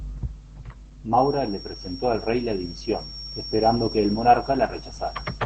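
From the start, the speech carries plainly audible Opus voice compression damage. Nothing comes through above about 8.6 kHz, and the coarse SILK-style coding leaves it muffled and a bit hoarse and robotic. That fits a low voice bitrate of roughly 12 kbps in wideband mode.

At 1.09 s a thin, steady feedback whistle around 5.5 kHz comes in and runs to the end, sitting well below the speech and swelling and fading slowly. The likely cause is a loudspeaker-to-microphone loop hovering just at the edge of feedback without taking off.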